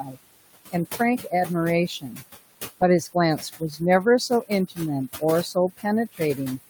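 Noise suppressor artifacts run through the whole clip: the suppressor pulls the room noise, which sits about 14 dB under the speech, down by about 18 dB in gaps, so the residue pumps up under each phrase.

Speech cut by the noise suppressor occurs at 0.04, 0.71, 1.88, 3.13, 4.29 and 5.54 s, each lasting well under a second. Quiet speech misread as noise drops by about 8 to 19 dB, so soft consonants and endings sound swallowed.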